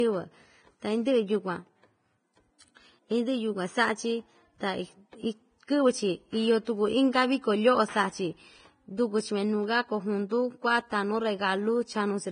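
The speech is hissy and grainy throughout, likely from heavy Vorbis compression near 22 kbps. A spectrogram shows a sharp ceiling at 9.7 kHz over speckled treble.

At 10.29 s, pre-echo spreads codec noise about 19 ms ahead of an attack as short hiss, visible as haze before the waveform's sharp rise.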